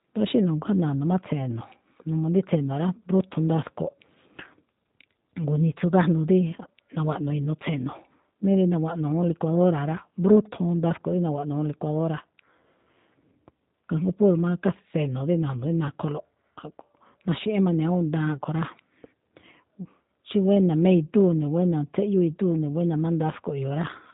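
Speech throughout shows plainly audible G.729 codec damage: band-limited below 4 kHz, rough and slightly synthetic, fitting an 8 kbit/s pulse-coded speech model rather than simple low-pass filtering.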